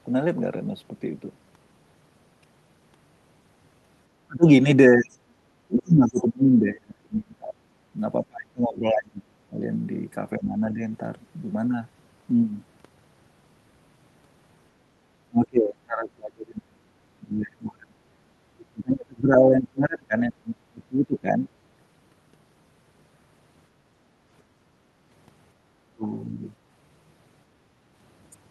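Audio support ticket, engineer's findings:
Echo canceller likely unable to separate near talker from far-end echo during double talk, so it attenuated both. Speech suppressed in double talk: talker dips or drops out at 4.27–9.64 s, 10.39–10.83 s, 15.28–18.18 s, 18.72–21.43 s and 25.65–26.05 s, up to about 35 dB down.

Residual loudspeaker echo likely not fully cancelled. Other side's voice leaking through at 5.11–5.17 s as a very faint scrap, about 35 dB below the talker.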